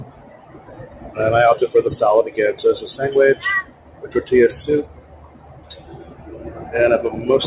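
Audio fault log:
throughout: noise suppressor applied to music or sounds. A speech-oriented noise suppressor stayed active on non-speech audio and kept judging its steady parts as background noise, so its gain swings by about 15 dB, roughly, as it clamps down and releases. Onsets pass through at close to full level while sustained material and decays are pulled down, which gives the sound a pumping, unsteady body and a thinned-out texture. The audio is band-limited to about 4 kHz, fitting the G.711 A-law call path at 64 kbps.
0.04–1.17 s, 3.64–4.09 s, 4.85–6.35 s: sound cut by the noise suppressor. In each of these spans the suppressor treated the held or fading sound as noise and attenuated it more than the surrounding audio, down by about 10 dB at the deepest point. The affected stretches last roughly a second, half a second and a second and a half. Tails are shortened and steady passages sag in level, while any sharp attacks within them still come through clearly.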